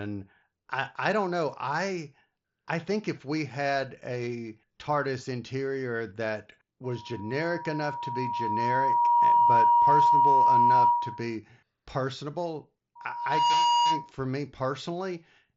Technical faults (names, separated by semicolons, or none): loudspeaker feedback squeal; concealed Bluetooth headset packet loss